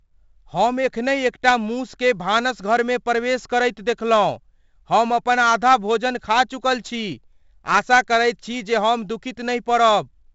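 Throughout the speech, 4-bit ADPCM compression adds gritty hiss that tracks loud passages and roughens sharp attacks. Nothing reaches above 7.7 kHz. The sound points to a 64 kbps stream.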